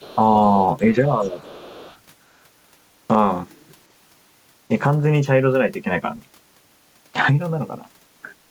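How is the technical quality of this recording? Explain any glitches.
The speech has two echo-related problems, both within the first two seconds.

Other side's voice leaking through at 0.0–0.16 s, 0.55–0.67 s and 1.21–1.98 s: a faint second voice, about 25 to 35 dB down, likely loudspeaker echo the canceller missed.

Speech suppressed in double talk at 0.15–0.21 s and 1.01–1.38 s: the talker dips by around 5 dB, likely because the canceller turned down both voices while they overlapped.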